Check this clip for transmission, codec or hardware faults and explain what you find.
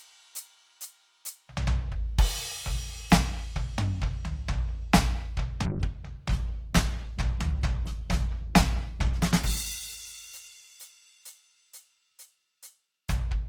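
There's one clear fault, a call bitrate drop, from 5.66 s to 13.29 s. The music goes from full and open to noticeably coarse, with the top end cut away and a watery, smeared texture, which fits the encoder falling from around 128 kbps to roughly 14 kbps after the bandwidth estimate collapsed. At that starved rate the codec quantises everything harshly and drops the high frequencies, and it sits at its worst for about 5.1 s.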